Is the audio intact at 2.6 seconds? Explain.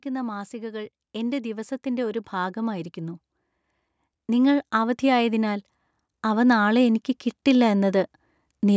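No. At 2.6 seconds the call's automatic gain control is still raising its gain, a climb of about 7 dB running from 0.05 to 3.27 s, so the speech and the background noise behind it swell together in a slow, steady rise.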